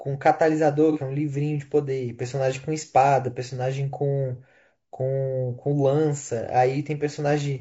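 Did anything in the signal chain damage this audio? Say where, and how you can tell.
Yes, at the codec stage. Throughout the speech there is a rough, grainy quality. Noise fills the gaps between the voice's harmonics, and the top band sounds thin and synthetic. That points to low-delay AAC compression, likely AAC-ELD at a bitrate around 32 kbps. It codes about 500 frequency lines a frame with a low-delay window. At this rate it spends too few bits to keep the damage inaudible.

At the network or transport stage, there is AAC frame loss with concealment between 0.92 and 0.97 s. A brief patch sounds smeared and noisy, roughly 30 ms of missing audio, which fits a single lost frame. The decoder had nothing to decode for that stretch, so it rebuilt the gap from the last good spectrum with randomised phase and guessed energy. That produces the hazy blur in place of clean detail.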